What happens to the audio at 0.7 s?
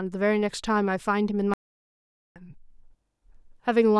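Nothing goes wrong at 0.7 s; the speech there is intact, with no dropout, click or distortion.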